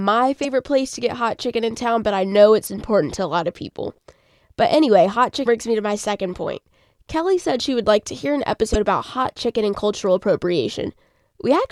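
At 0.41 to 0.45 s, 2.63 to 2.67 s, 5.45 s and 8.71 to 8.76 s the speech is broken by damaged data in a compressed stream. Corrupted bytes make the decoder misread frames and hunt for the next header, producing brief chirps or blips.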